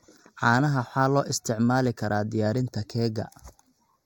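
From start to finish the speech carries channel delay (comb filtering). One channel is running late by a tiny amount, roughly a sixth of a millisecond, and once the two are folded to mono, the shared content cancels at evenly spaced frequencies. With a delay that short, the first notch sits up around 3 kHz, right in the presence region, so the voice comes across hollow and a bit dull, with a fixed phasey colour that never moves.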